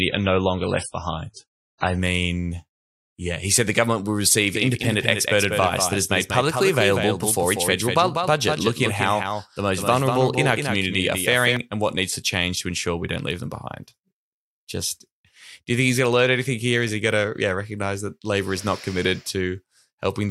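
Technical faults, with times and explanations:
0.0–2.0 s, adaptive stream starting at a low bitrate: nothing above 10.5 kHz and smeared, watery codec artefacts, which points to an MP3 stream around 24 kbit/s. Quality then jumps to roughly 128 kbit/s with no gap, unlike a fixed codec fault lasting throughout.
4.55–11.57 s, doubled audio track: a full-band copy of the speech trails by about a fifth of a second, a few dB quieter, with no decay or room colour. It starts and stops abruptly, unlike a reverb or acoustic echo. The likely cause is a second, slower capture path.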